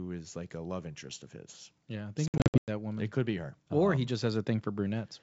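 Just after "I think", from about 2.28 to 2.70 s, there's packet loss on the ADPCM call: roughly 280 ms of audio drops out in scattered hard-edged gaps, the longest about 100 ms. Each time the speech resumes, the decoder's predictor and step size have drifted from the sender's, so it comes back with a bit of distortion before settling.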